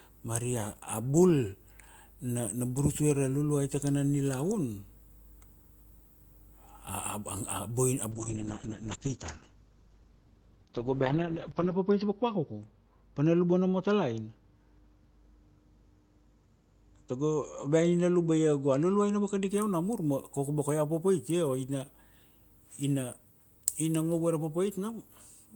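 A call bitrate drop runs from 8.12 s to 19.55 s. Starved of bits, the encoder codes coarsely and narrows the band from 20 kHz to 6 kHz, leaving the speech muffled and watery, worst for 3.6 s. The sound fits a fall from 40 to 8 kbps.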